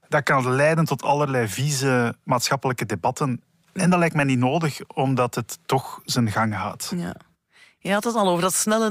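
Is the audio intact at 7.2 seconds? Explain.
Yes, the speech at 7.2 seconds plays through intact, with no dropout, click, distortion or other fault at that moment.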